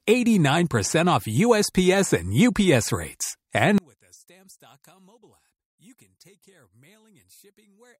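A speech clip in which, from 3.78 s to the end, the level drops by about 34 dB to a faint residue, likely one channel inverted cancelling in mono. Unlike a dropout or gain fault, faint remnants persist while centred content vanishes.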